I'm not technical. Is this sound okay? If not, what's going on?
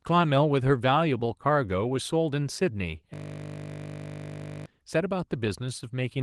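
No. From 3.14 to 4.66 seconds, the speech stops and turns into a steady, low buzz. This is a system hang loop. The computer or its sound driver froze for a moment. The sound hardware kept replaying the last tiny scrap of audio it had, over and over. That scrap is 20 milliseconds long. It repeats dozens of times, 50 times per second, so it blurs into a hum. The Opus voice compression on the recording is working as designed.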